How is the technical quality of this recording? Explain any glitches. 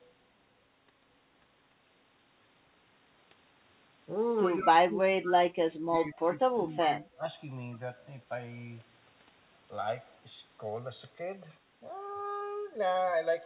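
The speech has two faults: a slow flanging throughout and three stretches of suppressed speech in the middle, all heard through a telephone-band path with nothing above 4 kHz.

Channels drifting apart, throughout: the two channels run on clocks differing by around 100 ppm, so their offset slides toward roughly 2 ms, sweeping comb notches as audible flanging.

Speech suppressed in double talk, at 4.59 to 5.60 s, 5.76 to 6.17 s and 6.52 to 7.25 s: the speech dips by up to about 25, 20 and 15 dB in turn. This is likely an echo canceller attenuating the talker while the far end spoke.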